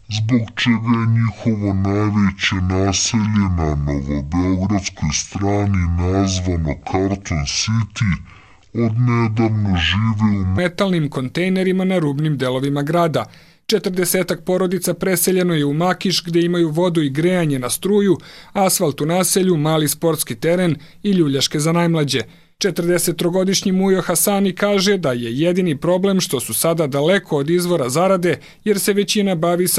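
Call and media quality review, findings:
Section at the wrong speed, 0.00 to 10.58 s: sound drags deep and slow, pitch sunk by around ten semitones, playback at 0.563x. Likely an editor or player clocking the audio at the wrong rate, stretching time and lowering pitch together.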